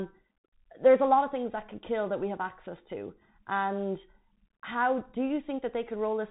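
Throughout the speech, the Bluetooth CVSD headset codec leaves a plainly audible mark. Its one-bit up-or-down steps cannot keep pace with loud, bright sounds, so sibilants turn scratchy over a granular hiss. A spectrogram shows a hard ceiling at 3.8 kHz, consistent with a 64 kbps headset link.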